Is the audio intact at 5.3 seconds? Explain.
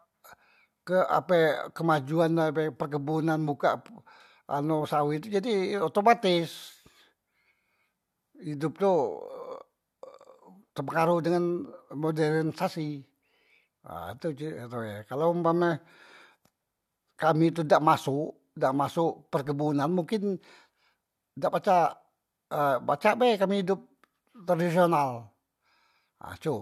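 Yes, the speech is intact at 5.3 seconds, with no dropout, click, distortion or other fault at that moment.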